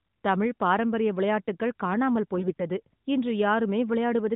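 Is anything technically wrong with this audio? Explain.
Yes. From 2.38 to 2.63 s there are AMR bit errors in the narrowband mobile codec stream, whose light coding character points to its highest 12.2 kbps mode. Roughly one bit in ten of the weakly protected frame data arrived flipped while the core checksum still passed, so the excitation pulses and fine pitch, gain and spectral values decode wrongly. Pitch and level roughly hold, but that quarter-second turns hoarse, scratchy and gargly.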